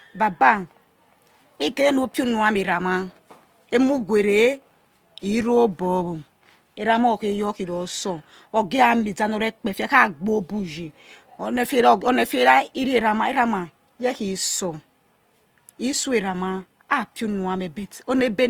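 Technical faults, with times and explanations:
Throughout, Opus compression: the speech sounds grainy and rough, with a noisy sheen, though the top end still reaches 20.2 kHz. The likely cause is Opus in music mode near 24 kbps, keeping each band's energy but filling starved bands with folded or noise content.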